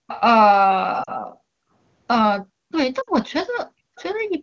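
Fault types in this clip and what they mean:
background gated by the echo canceller: The room background drops by up to about 40 dB for short stretches (0 to 0.07 s, 1.32 to 1.73 s, 3.83 to 3.95 s), then returns. Only the ambience dips while the other side plays, so the speech is not smeared or warbled.
echo leak: A faint delayed copy of the speech trails it by about 0.31 to 0.33 s, at 0.07 to 0.21 s (about 15 dB down), 2.71 s and 3.96 s (about 30 dB down). The likely cause is a loudspeaker's incomplete echo cancellation. Its fixed lag separates it from room reverb.
lost AMR speech frames: At 1.03 to 1.10 s (40 ms) and 3.01 to 3.10 s (60 ms), the sound drops to near silence within two frames as the decoder reuses its last good settings, which fits two and then three lost 20 ms frames. Unlike gating, the speech itself is affected.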